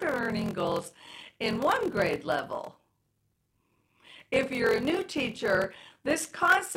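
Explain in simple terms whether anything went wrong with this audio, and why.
A steady low buzz runs through the whole speech, which also sounds slowed. This is a block size mismatch (padded): short blocks get zero-filled gaps, buzzing 43 times per second and playing at 0.86 speed.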